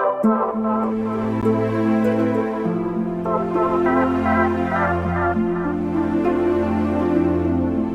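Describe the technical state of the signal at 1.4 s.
A gap between stream segments falls at 1.41 s: a hole of about 14 ms where the signal drops to digital silence with hard edges on both sides. The timestamps of two consecutive segments don't quite meet, which fits 6-second segments, so the player pads the missing interval with zeros. Nothing is lost; the following audio simply arrives about 14 ms later, heard as a brief, clean click-like dropout.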